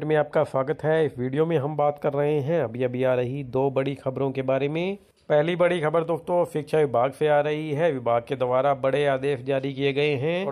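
No technical faults can be heard anywhere in the audio.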